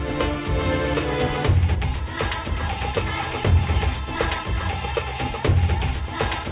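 No technical faults can be heard anywhere in the audio, which stays continuous and intact throughout.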